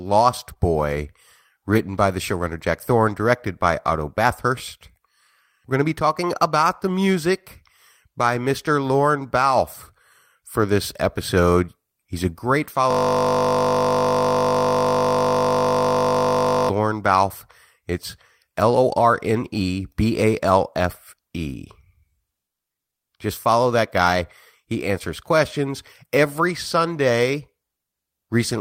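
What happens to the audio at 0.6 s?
Just before that point, from 0.53 to 0.57 s, there is a short concealed packet loss. About 20 ms of speech failed to arrive, and the decoder patched it by extending the preceding sound before blending back. It is heard as a brief smear or wobble. On a spectrogram the gap shows as a smoothed, repeated-looking slice where the fine detail stops changing, and on the waveform as a short stretch of filled-in signal joining the real signal.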